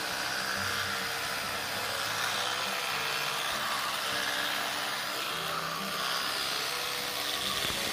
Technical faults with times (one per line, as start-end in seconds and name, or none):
0.00-2.36 doubled audio track